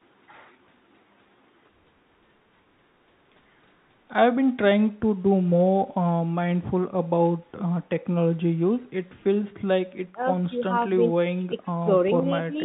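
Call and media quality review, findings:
No faults found in the speech; audio band tops out at 4 kHz, as expected from the call path and consistent with a G.711 mu-law codec at 64 kbps.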